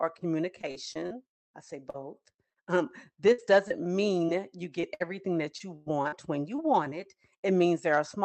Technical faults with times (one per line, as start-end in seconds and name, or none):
0.61-1.12 repeated packet loss (robotic sound)
1.48-2.58 repeated packet loss (robotic sound)
3.32-6.60 repeated packet loss (robotic sound)